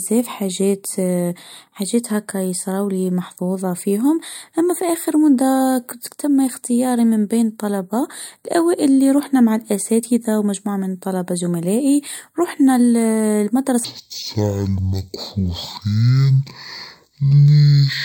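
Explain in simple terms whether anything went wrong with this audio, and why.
Something does go wrong near the end. From 13.84 s until the clip finishes at 18.05 s, the speech suddenly plays at half speed and a full octave lower, so it sounds slow and deep. This is a stereo read as mono fault. The left and right channels were stored alternately, but the player read them as one channel, which doubles the playback time. A faint, thin mirror image of the sound also appears up in the high frequencies. The words "فيها بزاف" follow this point.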